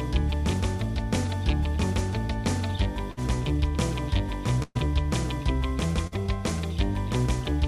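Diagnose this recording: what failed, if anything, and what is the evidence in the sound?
A burst of packet loss at the network stage caused three short gaps, at 3.11 to 3.19 s, 4.63 to 4.77 s and 6.07 to 6.18 s. In each, the receiver's concealment prolongs the last sound as a fading buzz or hiss, for about 55, 122 and 45 ms. The audio then resumes with roughly 60, 120 and 40 ms skipped. Unlike a buffer underrun's silent or clicking hole, the gap is filled with a decaying copy of the preceding sound. The second gap ends in about 10 ms of silence.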